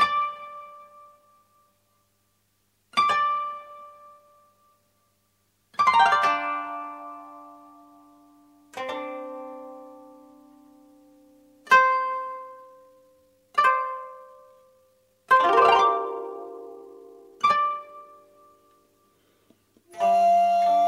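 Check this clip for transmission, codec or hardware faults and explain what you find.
One fault stands out. From 12.33 to 18.13 s, a time-stretched section: the pace jumps to about 1.58 times normal and sounds rushed, likely from software dropping short pieces to shorten it. Pitch stays unchanged, unlike a plain playback speed-up.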